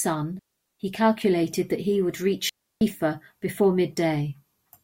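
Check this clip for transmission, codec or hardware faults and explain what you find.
Two digital wireless dropouts break up the speech. The first runs from 0.39 to 0.80 s, about 0.41 s, and the second from 2.49 to 2.81 s, about 0.32 s. Each time, the receiver lost too much of the digital stream and muted itself with a very quick fade, leaving a clean hole of near silence. Unlike an analog wireless dropout, neither gap has a hiss or noise burst at its edges, and nothing is smeared or repeated to fill it.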